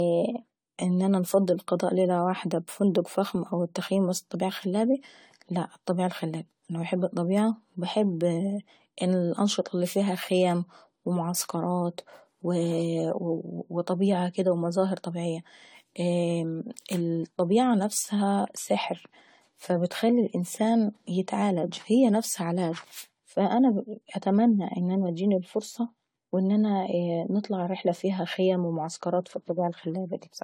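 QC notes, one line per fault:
Throughout, generation loss: the speech sounds swirly, smeared and hollow, with blurred attacks, beyond what one lossy pass would cause. This likely comes from repeated lossy re-encoding, around seven passes, consistent with AAC-LC near 64 kbit/s, each requantising on a shifted frame grid so that noise and spectral holes accumulate.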